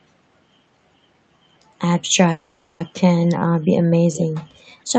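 Speech over a call path, with two faults. From 2.31 to 2.83 s there is a call audio freeze, likely from delayed packets draining the jitter buffer. The last sound is stretched into a fading buzz or hiss for roughly half a second. Nothing is lost, so the speech after it is simply shifted later. On a spectrogram this looks like a smeared, decaying band with no new onsets, and the waveform shows a tapering envelope. At 4.13 to 4.25 s a short echo leak appears, likely from loudspeaker pickup that the echo canceller missed. It is a copy of earlier speech delayed by about 0.42 s and about 10 dB quieter, visible as a faint repeat of an earlier pattern. Above 8 kHz the spectrogram is empty throughout, consistent with Opus at around 32 kbps.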